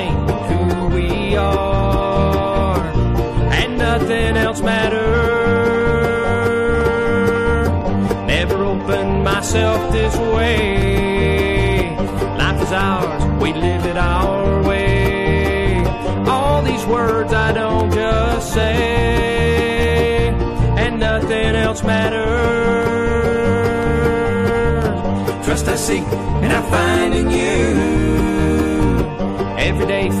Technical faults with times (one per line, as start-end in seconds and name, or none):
0.00-30.20 hard clipping
0.79-29.83 periodic USB or driver dropouts
18.61-18.63 repeated frames